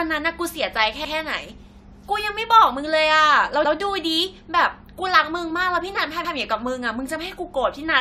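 Throughout, the speech sounds swirly, smeared and hollow, with blurred attacks and nothing above 19.2 kHz, likely generation loss from about four passes through an AAC-LC codec at around 96 kbit/s.

At 1.05, 3.65 and 6.25 s, overlapping chunks make about 100 ms replay at each join between 2.5 s chunks, producing a brief stutter every 2.6 s.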